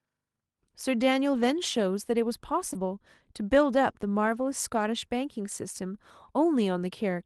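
Packets carrying this speech were lost in transit over an Opus call path whose audio stops at about 12 kHz, and the decoder rebuilt them from the lower-bitrate copies each following packet carries as in-band forward error correction. The lost packet rebuilt from error correction shows up at 1.33–1.43 s (about 60 ms, fitting three 20 ms packets), at 2.75–2.77 s, and at 4.27–4.41 s (about 80 ms). There is no dropout, but those stretches sound coarser and noisier than the surrounding audio. Around 2.73 s there is also a short concealed packet loss: about 20 ms arrived too late to use, and the receiver covered roughly 12 ms of it by extending the preceding sound before the error-correction copy took over at 2.75 s. That concealment is heard as a brief smear or wobble just before the rebuilt stretch.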